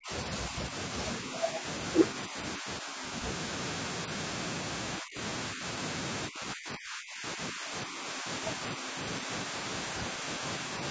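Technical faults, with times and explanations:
0.00–0.12 s, 0.49–0.74 s, 1.20–1.65 s, 2.13–3.22 s, 4.99–5.18 s, 5.52–5.63 s and 6.28–10.71 s, speech suppressed in double talk: the speech repeatedly ducks and thins. Some dips are slight, only a few decibels, but it nearly cuts out by about 40 dB at the very start and about 30 dB near 5.0 s, and the final stretch turns choppy for roughly three seconds. This is likely an echo canceller that could not tell the talker from loudspeaker echo while the far side was speaking, so it turned both down.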